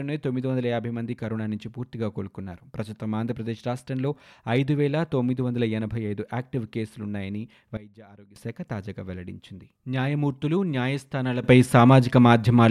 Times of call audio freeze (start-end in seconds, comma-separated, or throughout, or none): none